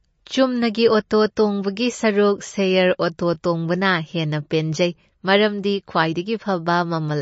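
From start to end, the speech carries plainly audible damage, likely from MP3 compression at a low bitrate, which fits something near 35 kbps. Nothing sounds above 7.7 kHz. The encoder has cut the treble there to save bits. Weak frequency lines also drop in and out between frames. That leaves a watery, swirling texture. S sounds turn metallic and chirpy. Sharp onsets smear, losing their crisp edge.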